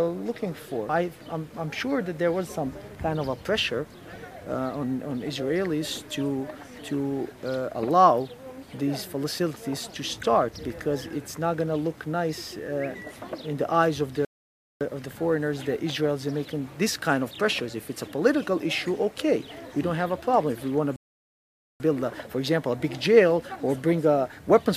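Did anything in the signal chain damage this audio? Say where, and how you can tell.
Yes: a playback stall, likely the player starving or blocking, cut the output to silence at 14.25–14.81 s (0.56 s) and 20.96–21.80 s (0.84 s), with the sound breaking off mid-flow each time.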